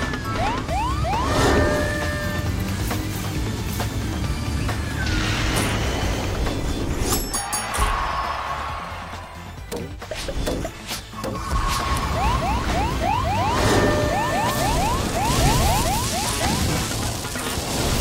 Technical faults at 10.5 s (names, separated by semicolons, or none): none